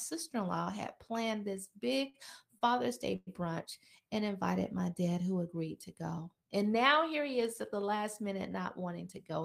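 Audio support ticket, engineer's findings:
Short stall from a late packet, 2.09–2.16 s: last sound held about 44 ms with a faint buzz, then resumes in place, nothing lost. Second at 2.58–2.77 s: held 30 ms, another 12 ms added later. Jitter buffer ran dry waiting on one late packet, so receiver stretched the previous frame. Playout delay grows by each hold. Tells apart from a freeze: brief, held tone stays level, no fade.

Call audio freeze, 3.16–3.29 s: sound continues as a buzz for about 108 ms, fading into roughly 10 ms of silence, then picks up where it stopped with nothing missing. Likely packets held up in the network, emptying the jitter buffer. Delay rises by 108 ms. Distinguished from a short stall by its length and the fill decaying to silence rather than a steady hold.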